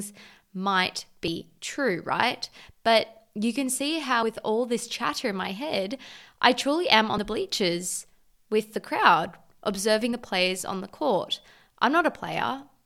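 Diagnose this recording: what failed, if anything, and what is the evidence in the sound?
Buffer stage: audio missing between chunks. Skips at 1.28, 4.23, 7.18 and 10.13 s each drop about 50 ms. They are likely lost as each 3 s chunk closes and the next opens.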